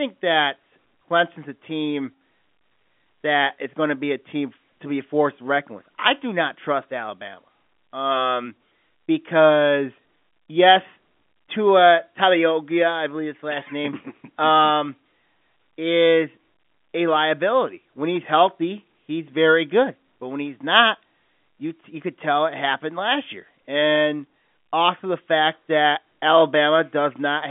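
Nothing stood out as a fault on listening to this speech recording, which arrives over a G.711 telephone line with the usual narrow telephone band and nothing audible above about 3.7 kHz.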